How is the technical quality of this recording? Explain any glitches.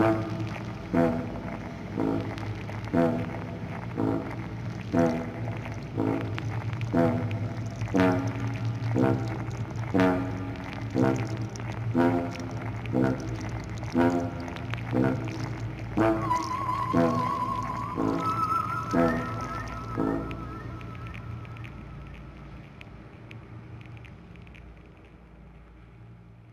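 No glitches can be heard anywhere in the recording, and the signal stays steady and intact throughout.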